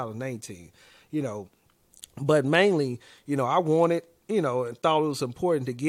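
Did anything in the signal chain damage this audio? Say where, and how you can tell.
No, nothing in this speech recording stood out as damage from any stage of the chain when listening to it.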